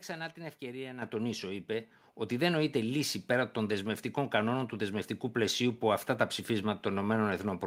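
A speech clip where the microphone volume gets stepped up twice: at 1.02 s, between "την ευκαιρία" and "τονίσω είπε ότι δεν", it jumps about 7 dB, then at 2.04 s, after "τονίσω είπε", about 3 dB more. Voice and background rise together, since the call software raised the input gain mid-sentence.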